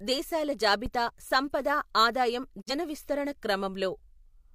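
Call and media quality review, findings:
Phantom power thump at 0.86 to 0.92 s. Deep low-frequency bump, decaying in about 13 ms. Probable component: mic preamp supply switched on or off on a live input. The voltage step passes through the coupling capacitors as an electrical pulse.

Digital broadcast dropout at 2.60 to 2.72 s. Speech fades out over 20 ms and goes silent. About 43 ms of programme is missing, which fits a single lost frame. Probable component: receiver decoder muting on bad or missing frames.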